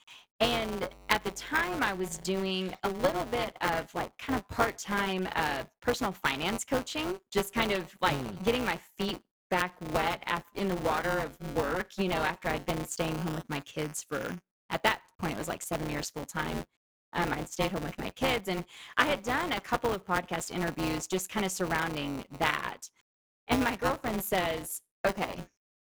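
From the start and through the whole clip, a robotic buzz at about 188 Hz rides on the speech and vanishes in pauses. This is buffer tearing: writer and reader of the ring buffer have slipped, which fits a 256-sample buffer, so roughly a sixth of each period replays audio from about 10 ms earlier, joined hard on both edges.

From 0.58 to 2.51 s, just before "a little bit of", a steady low 50 Hz tone with some low harmonics sits about 20 dB under the speech. This is mains hum, the power line leaking in through a ground loop or a nearby transformer.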